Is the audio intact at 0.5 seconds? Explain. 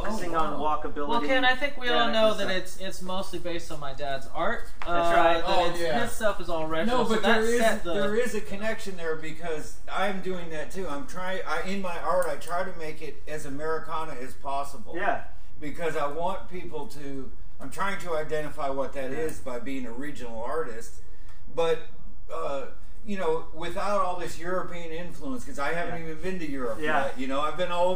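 No. A DC offset runs through the whole clip, including 0.5 s: the waveform sits shifted off zero by a constant of about -23 dBFS. Unlike hum or rumble, it adds no audible tone; it shows as steady 0 Hz energy and eats headroom.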